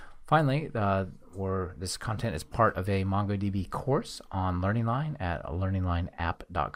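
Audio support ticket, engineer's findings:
Frames out of order, 2.51–2.57 s. Short garbled flutter. Two adjacent runs of decoded blocks played in swapped order, which fits pairs of 20 ms frames. Probable component: packet or frame reordering ahead of the decoder, jitter buffer or transport. No time lost; duration intact.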